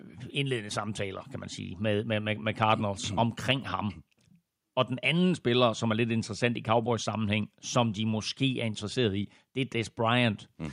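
A speech recording with nothing technically wrong to point to, at any time or from any cause.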